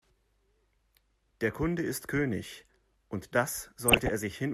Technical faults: DAB burbling

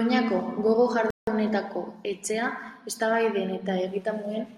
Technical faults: playback stall

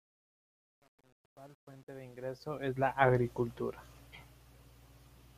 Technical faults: truncation distortion on a fade

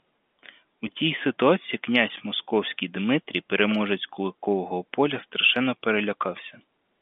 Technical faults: none

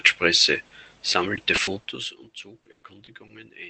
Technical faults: short concealed packet loss; repeated packet loss (robotic sound)

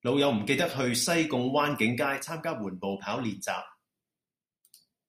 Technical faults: sudden gain jump

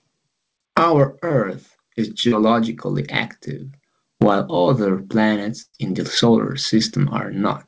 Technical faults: short concealed packet loss; burst of packet loss

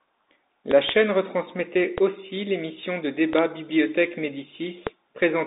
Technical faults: Bluetooth CVSD headset codec; loud pop

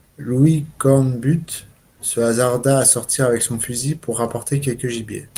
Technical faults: none

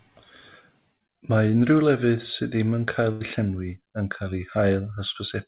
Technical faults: burst of packet loss

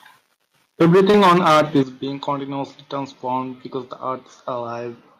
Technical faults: microphone overload; microphone volume stepped down; short concealed packet loss

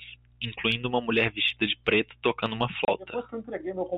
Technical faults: packet loss filled with silence

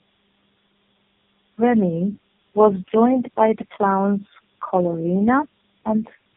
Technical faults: tandem speech coding

